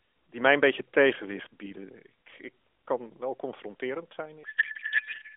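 Right after "ik kan wel confronterend", a codec payload misread takes over from 4.44 to 5.36 s. Octet-aligned AMR frames are being unpacked as bandwidth-efficient, so every field lands in the wrong place and the speech dissolves into garbled, warbly noise that barely tracks it.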